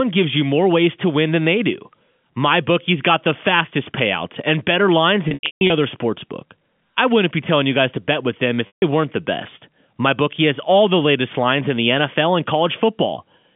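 Packet loss with pitch repetition, twice: from 5.28 to 5.70 s, after "payouts and better lines", gaps of up to 150 ms are bridged by repeating the last pitch period, and again from 8.67 to 8.82 s after "to bet with them". Each gap sounds like a held, buzzy tone fading away before the speech resumes over the narrow telephone band.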